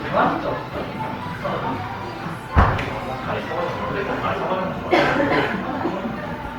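Throughout, the sounds are swirly, hollow and smeared with blurred attacks, likely generation loss from roughly five Opus passes; a single pass at the rate this suggests, around 48 kbit/s, would not sound this damaged.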